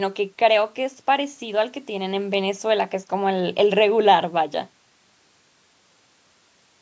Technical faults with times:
none

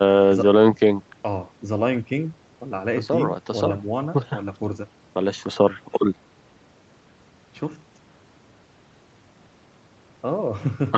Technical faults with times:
none

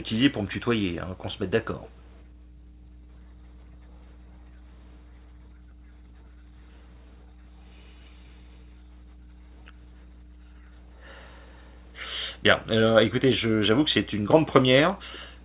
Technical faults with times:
0.00-15.44 mains hum
1.84-1.89 echo leak
1.91-2.02 background gated by the echo canceller

